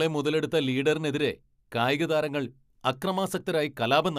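No technical faults are audible.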